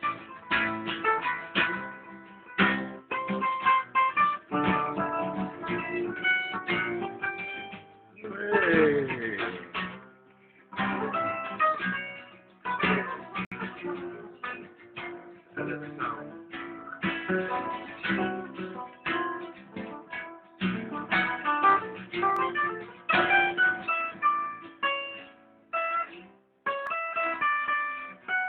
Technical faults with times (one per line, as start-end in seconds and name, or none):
13.45-13.52 gap at a join of encoded pieces
22.36 dropped samples
26.87 dropped samples